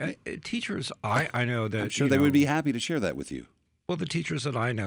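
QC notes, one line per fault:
1.0–3.3 s, resampler restarted on every block: regular 20 Hz ticking over the speech as each 50 ms block is upsampled separately, consistent with 24 kHz to 48 kHz conversion, leaving an error at every block edge.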